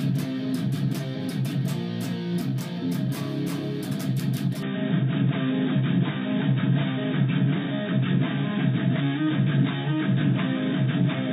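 A likely input switch to a poorer device occurs at 4.63 s and lasts to the end. With no gap, the sound turns dull and boxy, with nothing above 3.8 kHz, a level shift of roughly 5 dB, and a new noise floor about 30 dB below the signal.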